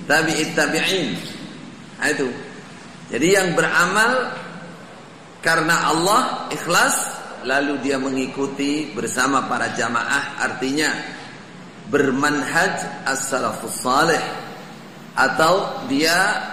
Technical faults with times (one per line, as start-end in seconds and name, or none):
13.26-16.52 USB whine